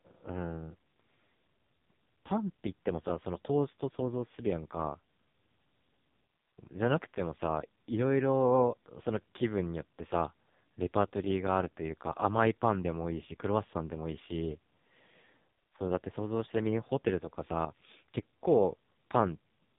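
From start to finish, the speech carries heavy AMR narrowband mobile codec damage. Nothing passes above 3.8 kHz. The buzzy, synthetic tone fits a low rate near 5.15 kbps.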